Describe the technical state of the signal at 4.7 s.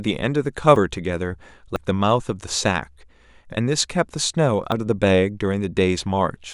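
At 4.72 s the program likely failed to collect a buffer before the hardware overwrote it, a dropped buffer (overrun), so about 40 ms vanishes, heard as a jump forward.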